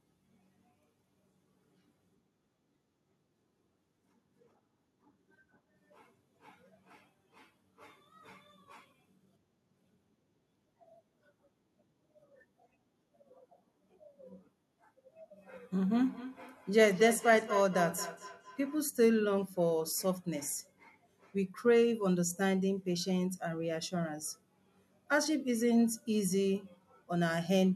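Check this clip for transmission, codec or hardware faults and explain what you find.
There's one fault here, a feedback echo between two devices, running from about 15.82 s to 18.83 s. During that stretch the speech comes back around at a steady spacing of roughly a fifth of a second, with the loudest repeat sitting about 12 dB below the talker. What's happening is that a second device in the same room is playing the call out loud and the other device's mic is picking that playback up and sending it back in. The local echo canceller only knows about its own speaker output, so this loop gets straight through.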